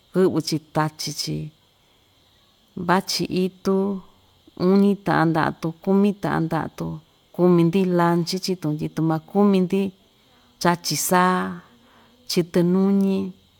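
No technical faults are audible.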